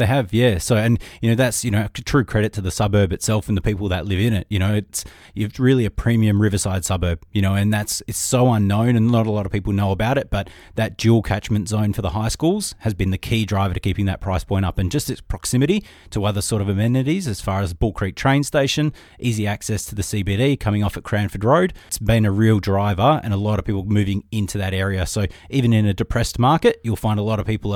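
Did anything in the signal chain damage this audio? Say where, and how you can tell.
No, nothing in the signal chain damaged this audio.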